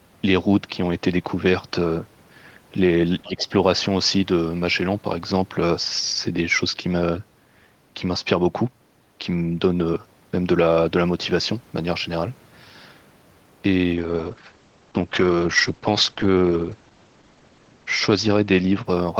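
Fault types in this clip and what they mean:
speech suppressed in double talk: With both ends talking at once, the echo canceller likely mistook the talker for loudspeaker echo and turned everything down. From 3.22 to 3.51 s the speech sinks by up to about 20 dB for roughly 300 ms.
call bitrate drop: The call's bandwidth estimate fell, pushing the encoder from 32 down to 10 kbps and narrowing the coded band from 20 kHz to 8 kHz. From 13.95 s onward the speech turns muffled and coarse, staying at its lowest for 3.92 s.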